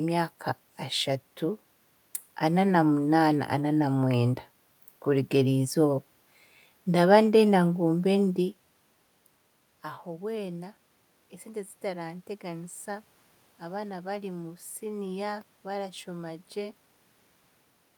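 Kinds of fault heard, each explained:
No system faults are heard in this speech recording.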